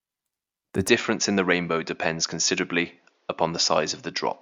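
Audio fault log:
0.88 to 4.41 s, input switched to a poorer device: the recording path likely changed to a different microphone or a headset's call profile at 0.88 s, with no gap at the changeover. From there to the end, the speech loses everything above 7 kHz and turns dull and boxy, drops in level by around 5 dB, and carries a faint new background noise roughly 40 dB under the speech, because the second device has a narrower band, lower gain and its own noise floor.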